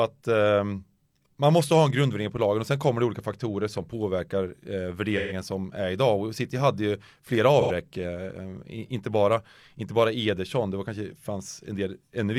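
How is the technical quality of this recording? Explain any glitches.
The recording has two short dropouts from AAC frame loss with concealment, at 5.17–5.33 s and 7.60–7.71 s. In each, the decoder rebuilt the missing audio from the last good spectrum, leaving brief smeared, phasey patches in the speech about 128 ms and 85 ms long.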